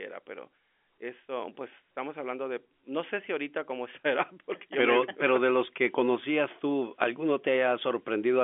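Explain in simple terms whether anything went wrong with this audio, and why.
Nothing went wrong: the speech has simply travelled over an ordinary fixed-line telephone connection using G.711 telephone coding, so the sound is limited to the usual phone range of about 250 Hz to 3.4 kHz, which is exactly how a normal phone line is meant to behave.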